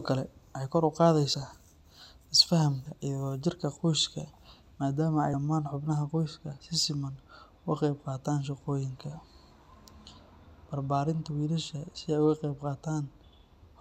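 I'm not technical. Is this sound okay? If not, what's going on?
No, not quite. At 1.34, 2.85 and 5.33 s the speech jumps ahead by a tiny chunk: about a frame, then two, then three. This is compressed frames skipped, where pieces of about 26 ms never got played. The last one lands just before "daman hubnaha" and sounds like a brief smeared blip.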